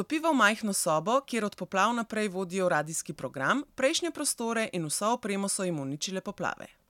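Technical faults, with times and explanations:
No technical faults can be heard in this speech recording. There is nothing to list with a time or an explanation.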